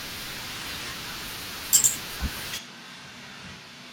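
Speech, with a switch to a distant microphone from 2.6 s to the end. The sound abruptly turns roomy and hollow, loses bass, drops about 10 dB and carries room noise about 30 dB below it. The likely cause is a lost close-microphone feed.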